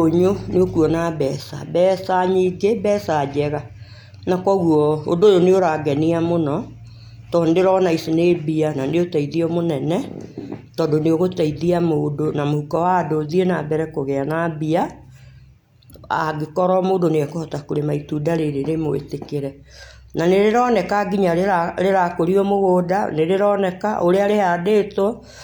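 Nothing stood out on listening to this speech recording; no technical problem could be heard at any point.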